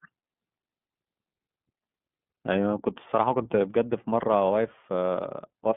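Speech coded with the iLBC codec throughout, band-limited to 150 Hz–3.5 kHz, with plainly audible rough, synthetic coding texture that fits its 13.33 kbps, 30 ms-frame mode.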